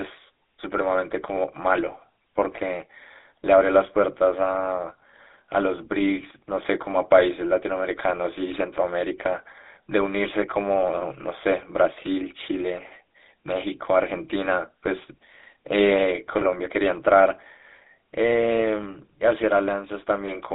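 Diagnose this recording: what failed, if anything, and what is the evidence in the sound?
Codec stage: the speech is buzzy and gravelly throughout, confined to 250 Hz to 3.7 kHz. That's the GSM full-rate codec's coarse pulse excitation, consistent with 13 kbit/s.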